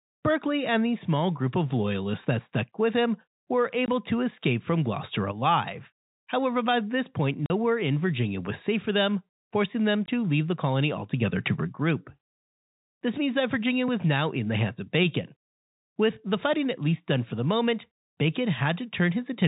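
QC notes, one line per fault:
3.86–3.88 s, 7.46–7.50 s, 10.06–10.08 s: packet loss filled with silence. Hard-edged holes of 20, 40 and 20 ms, which fits one or two 20 ms packets dropped and replaced with silence, under narrowband telephone-band sound.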